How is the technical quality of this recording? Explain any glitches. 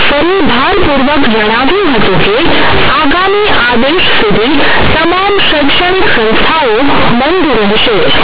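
Poor: the speech comes through harsh, very loud buzzing distortion from start to finish, and the gaps between phrases fill with heavy hiss rather than falling quiet. The fault is companded audio read as linear. The mu-law telephone bytes, 8 kHz G.711, were played directly as plain 8-bit samples without expansion. Because mu-law keeps the sign in the top bit of each byte, every sign change now jumps across roughly half the output range. Soft sounds therefore come out as loud as strong ones, and the waveform is badly distorted.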